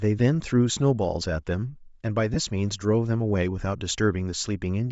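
Bluetooth LC3 compression runs through the whole recording and plainly colours the speech. The likely cause is the LE Audio transform codec at a low rate, consistent with about 32 kbps in short 7.5 ms frames. At that budget the encoder discards much of the upper spectrum and fills the gaps with synthetic noise, so the voice carries a breathy, grainy edge on top.

Lost LE Audio frames cause a brief dropout from 2.34 to 2.37 s, roughly 22.5 ms, which fits three consecutive lost frames. During the gap the decoder fills in by repeating the last good spectrum with randomised signs. The loss is brief, so the sound there does not drop to silence. Normal decoding resumes right after.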